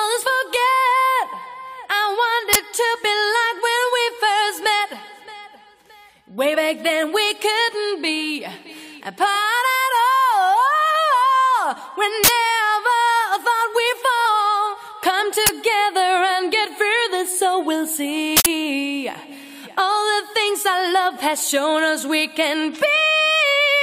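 At 2.53 to 2.55 s there is an uninitialised buffer. A block was sent to the output before any audio was written into it. Leftover memory played as samples instead. It sounds like a short, loud crack lasting about 23 ms. That length fits a 1024-sample buffer.

At 2.94 to 2.96 s, compressed frames are skipped. One frame of about 23.2 ms never reached the output. Either it was missing or the decoder rejected it as damaged. The audio jumps ahead by roughly 20 ms.

At 12.24 to 12.28 s another uninitialised buffer bursts out. It lasts about 46 ms, which points to a 2048-sample block.

At 14.25 s a second skip occurs. About two frames are lost, roughly 50 ms of audio.

Two more noise bursts follow. The one at 15.46 to 15.49 s runs about 23 ms. The one at 18.37 to 18.46 s runs about 93 ms, matching a 4096-sample block. It is the longest burst in the clip.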